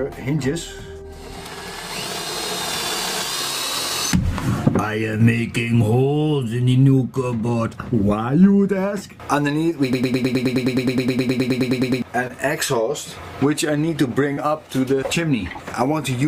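At 5.17 to 5.22 s there's a short concealed packet loss: about 20 ms of audio never arrived in time, so the receiver extended the last bit of sound to cover the hole and then eased back into the real signal. You hear it as a quick smear or wobble. The same thing happens at 12.27 to 12.31 s, again about 20 ms, and at 14.33 to 14.39 s, where roughly 40 ms went missing and the patched-over wobble is a touch longer.

Between those, from 9.93 to 12.02 s, there's a broken-record loop. A fragment of about 105 ms repeats back to back around 20 times, giving that stuck, machine-gun stutter. The likely cause is a stalled player, encoder or stream that kept resending the last chunk it held. Whatever should have played during those two seconds is simply gone.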